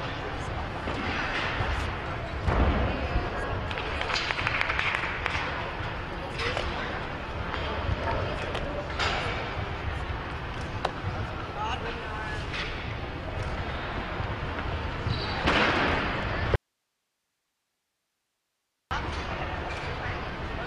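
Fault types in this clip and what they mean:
Audio dropout to a faint residue: from 16.56 s to 18.91 s the sound cuts off abruptly and stays gone for about 2.35 s, then returns just as suddenly. The gap holds only a steady hiss at roughly 50 dB below the normal signal level. There is no fade or natural pause. The likely cause is a momentary loss of the source feeding a path that stayed live, so the downstream noise floor carried on through the break.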